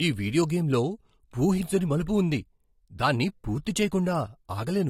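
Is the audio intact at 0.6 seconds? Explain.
No. At 0.6 seconds the speech has the thin, swirly texture of heavy compression, with nothing above about 16.6 kHz, and this holds for the whole clip rather than at that moment alone. The likely cause is low-bitrate audio saved at a high bitrate: the sound points to an earlier low-rate encoding, around 48 kbit/s AAC, later re-saved as a roomy MP3. The second pass keeps the first encoder's artefacts and band limit but cannot restore what it discarded.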